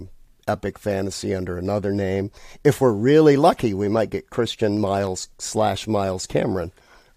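Speech recording with periodic USB or driver dropouts between 3.37 and 6.47 s. A tick occurs every 0.1 s, about ten per second, roughly thirty in all, audible only while there is signal. Each tick marks a tiny fraction of a millisecond of audio skipped outright rather than replaced with silence, so the waveform jumps and clicks. The fixed spacing points to a background process periodically stalling the USB bus or audio driver.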